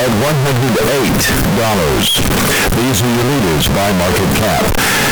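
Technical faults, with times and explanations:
Throughout, float read as integer: the speech is a harsh, near-square wall at an almost fixed, high level, noise as loud as the talker, likely 32-bit float samples read as 32-bit integers.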